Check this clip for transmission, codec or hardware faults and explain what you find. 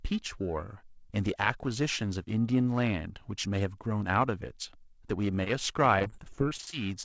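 Two kinds of packet-loss fault appear near the end of the speech, and the spectrum stops at 8 kHz throughout, as a wideband call codec would leave it.

Short concealed packet loss occurs twice back to back, at 5.44–5.48 s and 5.48–5.51 s, each losing 20 ms. The receiver extended the preceding sound to cover each gap, giving a brief smear.

Repeated packet loss (robotic sound) runs from 5.99 to 6.74 s: 13 gaps, the longest 30 ms, with about 30% of that stretch patched. The repeated patching makes the speech choppy, with pieces missing. The waveform shows a run of short, smoothed, repetitive segments.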